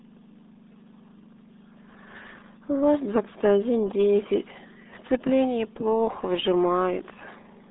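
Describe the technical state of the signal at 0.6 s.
At 0.6 s the speech carries the RealAudio 14.4 codec fault, present across the whole clip. A very low-rate speech coder, consistent with about 8 kbit/s, squeezes the signal into a narrow 200 Hz to 3.7 kHz band, leaving nothing above 3.8 kHz. The heavy coding damage makes the speech sound muffled and gargly.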